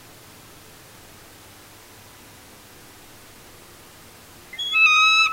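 At 0.44 s and again at 4.53 s, damaged data in a compressed stream makes the decoder misread frames and resynchronise, giving a brief glitch.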